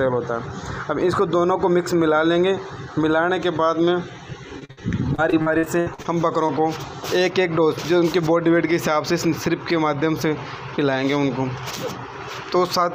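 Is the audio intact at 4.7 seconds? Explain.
No. At 4.7 s the audio is being filled in rather than played as received. A short concealed packet loss runs from 4.65 to 4.71 s. About 40 ms of audio never arrived in time, so the receiver continued the preceding sound for roughly 38 ms and blended back into real audio. It is heard as a quick smear or wobble. An earlier, similar one at 4.59–4.63 s replaced about 20 ms.

Straight after, from 4.71 to 4.79 s, comes a burst of packet loss. About 60 ms went missing in a row, and the receiver extended the last sound while fading it down, producing a held buzz or dying hiss. What sets the burst apart from the short losses is its length and the fade. Instead of a brief blip that rejoins smoothly, the sound sags and then resumes further on, with the stretch in between gone.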